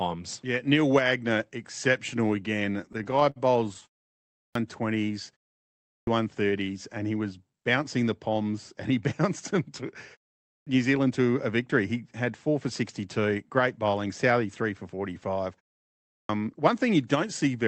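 From 2.81 to 4.02 s, just after "exceptional again", packets arrived late and the jitter buffer kept running dry, causing repeated stalls (stutter). The receiver stretched the last sound fifteen times, filling 324 ms in total, the longest gap 138 ms, so the speech drags and stammers though nothing is lost.

At 4.26, 5.78, 10.41 (after "he bounced them to") and 16.04 s, the output device dozed during pauses of 0.33 to 0.52 s and was slow to wake. Each is a clipped start after a pause: roughly 0.25 to 0.29 s of the returning speech is swallowed, so it bursts in abruptly without its opening sounds.

From 7.10 to 7.74 s, with the buffer over-full, the receiver trimmed pitch-period slices, around 70 ms in all. This jitter buffer speed-up plays the speech at 110% of normal speed without changing its pitch, making it sound briefly hurried.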